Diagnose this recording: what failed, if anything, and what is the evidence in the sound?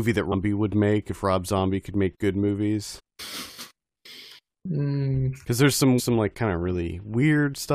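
Damaged data in a compressed stream at 0.31–0.34, 2.98–3.00 and 5.98–6.00 s (codec stage): corrupt frames make the decoder lose sync, producing brief glitches of about 20 ms each.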